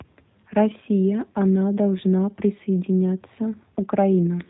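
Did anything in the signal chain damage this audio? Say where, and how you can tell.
Yes, at the codec stage. Throughout, the speech has a G.729 codec's rough, synthetic quality with nothing above 4 kHz, which fits an 8 kbit/s model-based rebuild.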